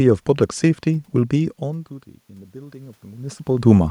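From 1.62 to 3.46 s there's automatic gain rising. The speech level at the mic drops by about 23 dB when the talker shifts around 1.5 s, so the AGC eases its gain up about 5 dB, and the room noise swells right along with the voice.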